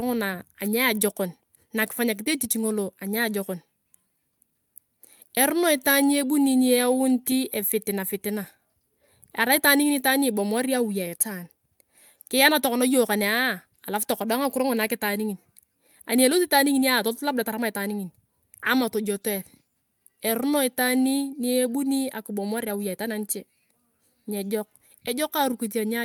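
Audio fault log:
No faults detected in this recording.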